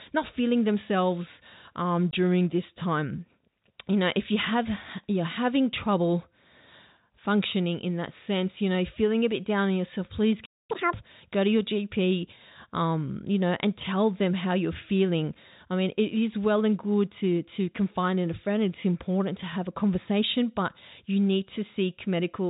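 At 2.11 to 2.13 s, right after "not feeling themselves um" and before "this time", a 20 ms hole with hard edges cuts the speech. This is packet loss filled with silence, and its length fits two 10 ms packets.

After "down on yourself please", the sound freezes from 10.45 to 10.71 s for about 0.24 s. This playback stall is likely from the player running out of data.

From 10.71 to 10.94 s the speech then rushes at double speed and jumps around ten semitones higher. This is catch-up at higher speed, as the player clears its backlog.

Throughout, the G.711 telephone coding caps the band at 4 kHz.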